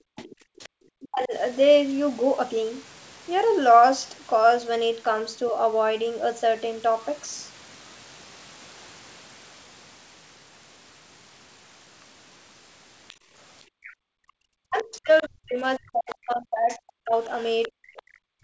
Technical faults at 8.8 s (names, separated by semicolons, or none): none